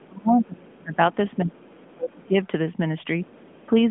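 Around 1.59 to 1.64 s and again at 1.88 to 1.94 s, two very faint scraps of a second voice slip in, way down, about 35 dB under the talker. That's likely the other side's voice leaking through, where the far end's loudspeaker audio got past the echo canceller. Through the narrowband mobile line, which stops near 3.7 kHz, the scraps come across brief.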